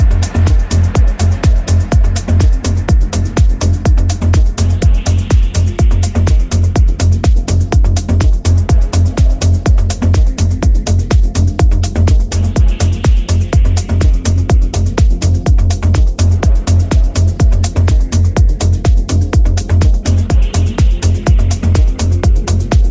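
Nothing here stands out as a technical fault; the audio runs along without any glitch or break worth pointing to.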